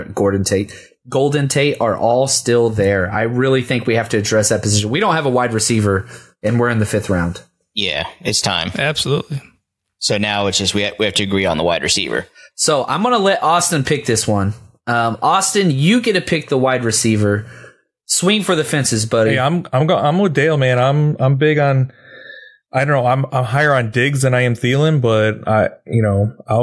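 Nothing in the recording stands out as a technical fault; the speech carries on from the first moment to the last without any glitch worth pointing to.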